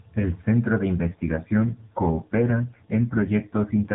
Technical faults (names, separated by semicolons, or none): AMR rate drop